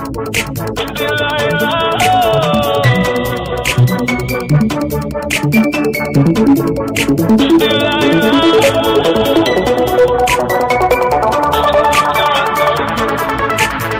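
Hard clipping runs throughout: peaks driven about 7 dB past the limit are sliced flat on a few percent of samples, adding harsh crackle, flat-topped waveform, and added high-frequency harmonics.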